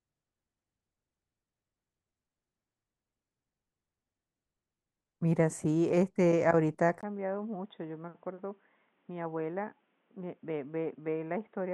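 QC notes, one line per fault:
7.01–11.74 s, input switched to a poorer device: after a 20 ms gap the sound turns dull and boxy, with nothing above 3.8 kHz, level down roughly 10 dB and a new hiss about 40 dB below the signal. That combination, rather than a filter alone, likely points to a device change.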